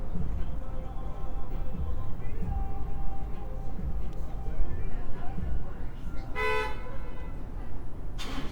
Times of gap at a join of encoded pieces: none

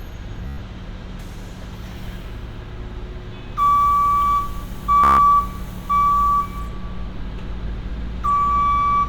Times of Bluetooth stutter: 0.47-0.58, 5.04-5.18

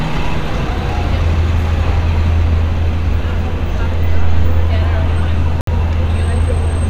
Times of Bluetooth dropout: 5.61-5.69

